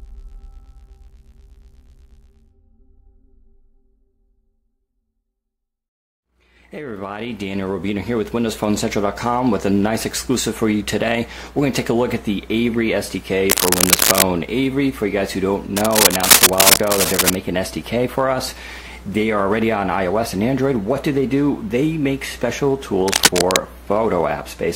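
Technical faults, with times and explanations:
13.50 to 14.23 s, 15.77 to 17.35 s and 23.08 to 23.57 s, cable scratch noise: dense, ragged bursts of scratchy rustle sit a bit louder than the sound itself, likely from a worn cable or connector being moved, with its contact resistance jumping around quickly.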